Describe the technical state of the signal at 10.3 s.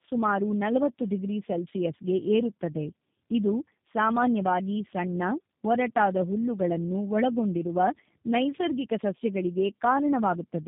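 At 10.3 s the signal shows tandem speech coding, present throughout the clip. The sound points to two low-rate coders in series, consistent with G.729A at 8 kbit/s, joined by a G.711 A-law link. The second coder re-encodes the first one's already degraded output, so errors compound. The speech sounds rough, muffled and warbly, with nothing above 3.7 kHz.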